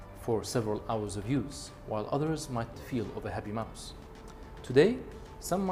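At 2.73 to 2.75 s there is a skip ahead. About a second of audio was dropped. Playback jumps forward with no gap, and both sides join almost directly.

From 2.83 to 5.66 s a jitter buffer speed-up follows. Short pitch-period pieces were cut repeatedly, about a third of a second in total. The sound runs at 109% speed, same pitch, and feels hurried.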